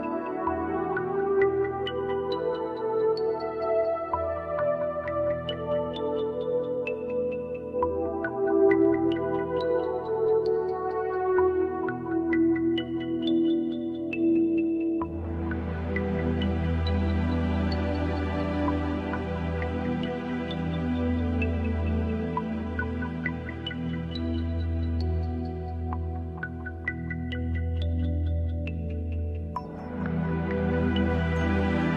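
No technical faults can be heard anywhere in the audio; the signal stays continuous and stable throughout.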